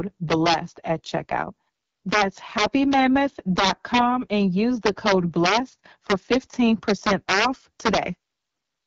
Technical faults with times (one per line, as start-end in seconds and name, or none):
0.00-8.86 AMR wideband (HD Voice) codec
0.32-0.54 integer overflow
2.13-2.22 integer overflow
2.58-2.93 integer overflow
3.59-3.99 integer overflow
4.86-5.57 integer overflow
6.10-6.35 integer overflow
6.89-7.45 integer overflow
7.86-7.98 integer overflow